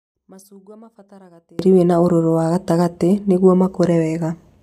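From the start to about 1.59 s the speech sits roughly 32 dB down, leaving only a faint trace until it comes back at "wĩna ũrũrũ wa gatagatĩ". That's likely one channel inverted, so the centred voice cancels when the two sides are summed to mono.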